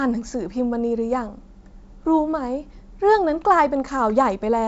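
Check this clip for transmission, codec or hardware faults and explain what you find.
Nothing wrong turns up in this one: the speech comes across a G.722 wideband telephone link at 64 kbit/s, and whatever that coding leaves behind is faint at most.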